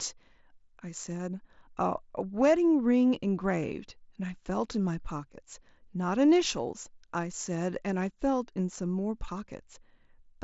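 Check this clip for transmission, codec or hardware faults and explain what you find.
No transmission, codec or hardware faults found; the speech is band-limited to about 7.7 kHz with light coding texture, as expected from a wideband mSBC Bluetooth headset link working normally.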